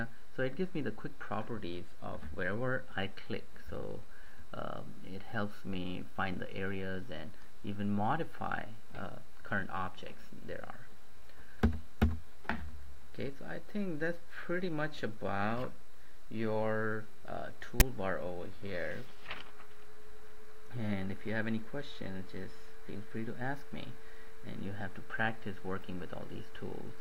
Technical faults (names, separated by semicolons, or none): file tags played as audio